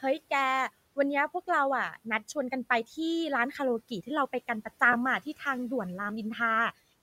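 At 4.92 to 4.95 s the speech briefly turns into a short, grainy smear, with its tonal quality replaced by a noise-like blur for roughly 15 ms before it snaps back. This is lost LE Audio frames. Bluetooth LE Audio packets went missing, which fits two lost frames, and the LC3 decoder covered the gap by repeating the last spectrum with randomised signs. That keeps the level but scrambles the waveform. The room noise, about 24 dB below the speech, carries on underneath.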